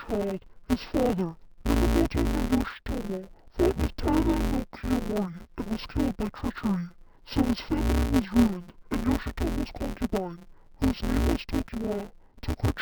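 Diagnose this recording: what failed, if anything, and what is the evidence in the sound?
A sample-format conversion fault, interleaved audio read as planar, runs through the whole speech clip: dull, robotic buzz at 172 Hz, fitting 256-sample blocks of 5.8 ms; spectrogram shows 172 Hz comb lines.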